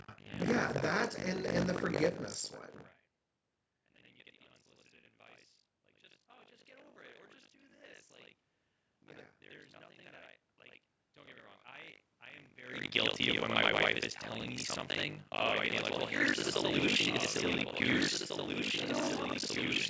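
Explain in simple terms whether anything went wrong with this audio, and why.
Buffer tearing runs through the whole clip: the speech carries a steady robotic buzz, 50 times a second. The program filling the audio buffer and the hardware reading it fell out of step, so roughly half of every 20 ms chunk replays sound from about 70 ms earlier.

A doubled audio track starts at 15.41 s, just after "is telling me something", and lasts to the end. A second, quieter copy of the speech trails about two seconds behind, likely because the sound was captured twice through a slower second path.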